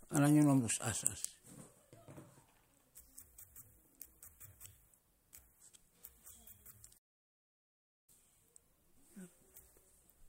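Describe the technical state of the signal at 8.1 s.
At 8.1 s the speech has just resumed after a playback stall from 6.97 to 8.09 s. It is a 1.1 s silence, likely from the player running out of data. Unlike a brief dropout, the gap lasts a noticeable time.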